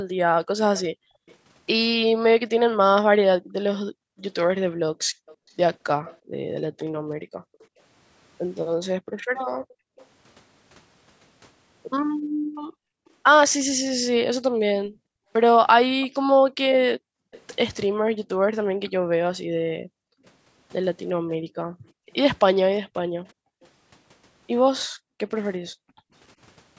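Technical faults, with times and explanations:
0.78–10.06 s, 16.01–17.41 s, 23.25–23.67 s: echo leak. A faint delayed copy of the speech trails by roughly 350–370 ms, about 20–35 dB down, likely residue an echo canceller missed.
0.95–26.13 s: background gated by the echo canceller. Room sound repeatedly dips, up to about 40 dB, around seven seconds in total, as the canceller clamps the microphone.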